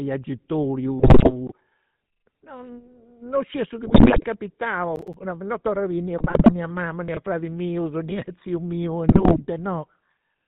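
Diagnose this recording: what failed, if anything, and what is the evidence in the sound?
The codec stage is the cause of the roughness heard throughout. The speech has the buzzy, gravelly texture and dull top end of the GSM full-rate codec, with nothing above 4 kHz, and the damage is plainly audible. At 13 kbit/s the coder models the vocal tract and drives it with a sparse, regularly spaced pulse excitation. That discards much of the fine waveform detail, so voiced sounds come out rasping rather than smooth.

GSM bit errors on the radio link cause the four bursts of squawking and gargling at 0.99–1.33 s, 3.86–4.25 s, 6.18–6.53 s (between "biri nì a" and "a mama") and 9.08–9.41 s. The error rates fall across these bursts from about 8.7% to 4.1%. Corrupted filter, pitch and gain parameters reach the decoder, so each affected frame has a bent spectrum or a sudden level jump.

Chunks out of order, a buffering or storage fault, cause two short jumbled moments. 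The first, at 1.47–1.52 s, plays a chunk of about 21 ms one slot late. The second, at 7.08–7.17 s just after "a mama", is a chunk of the same length arriving three slots late. No audio is lost, but the misplaced chunk is spliced in after its successors, and the three hard joins it creates cause the scrambled texture.

Processor overload crackle, a driver or buffer fault, produces a brief gritty tearing at 4.96–5.14 s, just before "non torru". The spacing of the dropouts fits buffers of around 10 ms, with roughly five deadlines missed in a row. Each missed buffer was filled with silence, so the sound is chopped by tiny hard-edged gaps that blend into a crackle and stop once the processing load eases.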